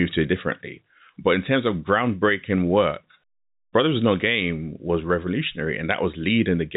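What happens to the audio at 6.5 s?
Nothing goes wrong at 6.5 s: the speech there carries on intact, with the narrow telephone bandwidth of G.711 coding that tops out around 3.8 kHz.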